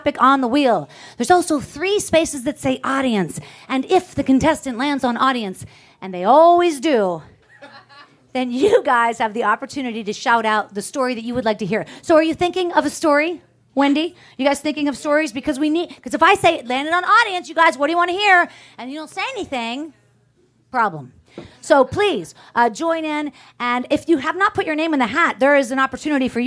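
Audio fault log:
No fault is heard anywhere in the audio. Nothing in it calls for an entry in this log.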